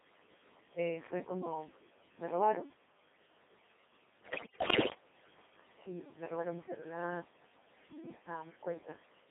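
Right from the start the speech has that unmistakable Codec 2 vocoder sound: robotic and buzzy, because the decoder isn't passing along the waveform at all. It rebuilds the voice from sine waves using only pitch, voicing, energy and a rough spectral envelope. The damage here is heavy, the band runs from about 200 Hz to 3.6 kHz, and the codec runs in its 2.4 kbit/s mode. Anything that isn't a single clean voice gets smeared into the synthetic buzz.

Layered on top for the whole clip are noise suppressor artifacts. The suppressor pulls down whichever bands it judges to be steady noise, frame by frame, by about 14 dB here. The room noise, sitting about 15 dB under the speech, ducks away in the gaps and creeps back up under the talking.

Then from 4.23 to 4.94 s you get bit errors on digital voice radio, the classic edge-of-coverage failure. At such a low rate every bit steers the pitch, level, voicing or spectrum of an entire frame, so corrupted bits throw the synthesis around wildly. 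For that stretch the voice jumps in pitch and loudness, the tone colour lurches, and it dissolves into bleeps and robotic gibberish. That suggests a high error rate, roughly 15%, hitting about 33 frames.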